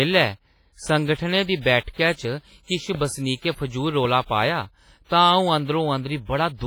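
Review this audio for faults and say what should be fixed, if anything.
Heavy WMA compression runs throughout, likely from a low-bitrate encode near 24 kbps. Coarse long-block quantisation leaves washy, ringing speech with breathing hiss; the spectrogram shows smeared, patchy bands and missing weak lines. Prevent it by encoding at a higher bitrate or keeping the uncompressed original.

A loud pop sits at 2.95 to 2.97 s and another at 4.05 to 4.07 s. Each is likely a voltage pulse added on top of continuing speech, peaking a few dB above it, visible as thin vertical full-band spikes. Prevent them by securing connectors, switching gear before recording and grounding against static.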